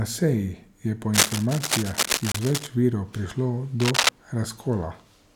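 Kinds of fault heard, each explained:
Cable scratch noise: A worn cable, plug or control was likely being moved, so its contact resistance jumped about quickly and fed ragged bursts of noise into the speech path. Right after "je po", from 1.13 to 2.67 s, a dense scratching runs over the speech at roughly the same loudness as the speech. A second, shorter patch from 3.8 to 4.1 s is somewhat louder than the speech.
Bluetooth stall: Radio interference likely delayed packets on the wireless link, so the headphones' buffer ran empty and playback paused until the resent data arrived. The speech drops out completely from 2.32 to 2.35 s, a gap of 27 ms, and then continues. Because the gap falls inside the first scratching passage, it sounds like a brief hole punched through that noise as well as through the speech.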